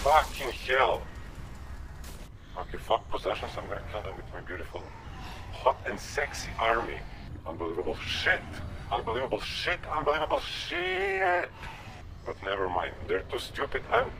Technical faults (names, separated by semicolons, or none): none